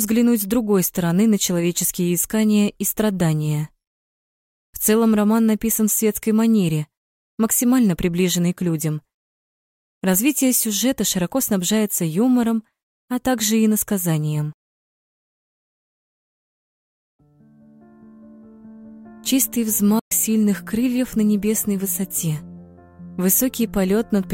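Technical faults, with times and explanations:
19.99 to 20.12 s, Bluetooth dropout: the sound cuts out for about 116 ms, then returns further along, as if it had kept playing. Packets likely reached the headphones too late and were discarded. The length fits about five lost packets.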